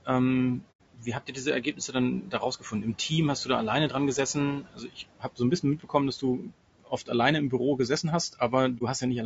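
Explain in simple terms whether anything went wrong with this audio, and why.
Several things went wrong, mostly in the processing applied to this speech before it was sent.

Noise suppressor artifacts: a noise-cleaning stage kept pushing down whatever it judged to be steady background hum. The background drops away between phrases and comes back under the talking.

Speech cut by the noise suppressor: that same cleaning stage sometimes mistook parts of the talking for noise and turned them down. Between 0.6 and 3.11 s and again between 4.34 and 7.1 s, roughly a second of sound in each stretch goes faint or swallowed. A briefer dip occurs between 8.03 and 9.03 s.

Low-delay AAC compression: the voice sounds rough and grainy throughout, with a hiss-like fuzz woven into it and a dull, slightly artificial top end. This is likely caused by squeezing the audio with the low-delay AAC format used for video calls.

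AAC frame loss with muting: small chunks of the compressed stream went missing, and the receiver filled them with silence. The sound fades out and back in at 0.71 to 0.8 s, a gap of about 90 ms, and briefly again at 8.78 to 8.82 s.

The ordinary room noise underneath, sitting well below the voice, belongs to the recording itself and is not a fault.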